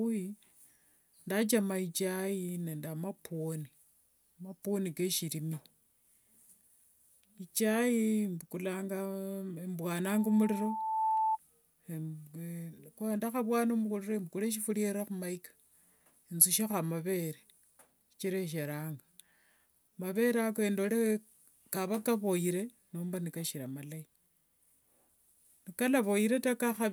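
At 10.04 s a loudspeaker feedback squeal begins: the microphone is picking up the loudspeaker it feeds, and at 879 Hz the loop gain has passed unity, so that one pitch feeds on itself. Over roughly a second it swells from a faint ring into a piercing tone that ends up somewhat louder than the speech, then stops at 11.38 s. That steady build at a single pitch is what separates it from an added test tone or interference whine, which would arrive at full level.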